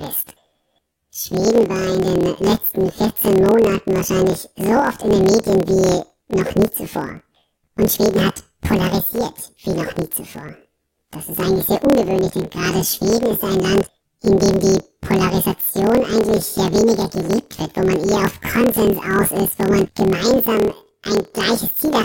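From start to finish, the speech carries a planar audio read as interleaved fault: each 26.12 ms block of left-then-right samples is taken as alternating pairs, so every block plays twice at double speed. Voices sit an octave high, with a fluttering buzz at 38.3 Hz, the block rate. A spectrogram shows harmonics spaced twice as wide, sliced by regular vertical seams every 26 ms. The waveform shows each segment squeezed and repeated.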